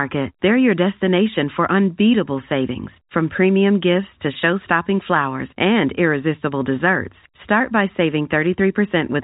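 Nothing stood out on listening to this speech recording, which carries the narrow telephone band of G.711 coding with no audible content above about 3.8 kHz.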